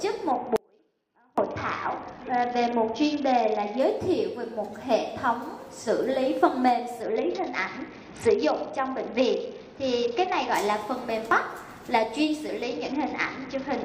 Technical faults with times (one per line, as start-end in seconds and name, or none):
0.31-3.80 Bluetooth SBC bit pool drop
0.56-1.38 audio dropout to a faint residue
7.02-10.54 Bluetooth SBC bit pool drop
12.63-13.84 Bluetooth SBC bit pool drop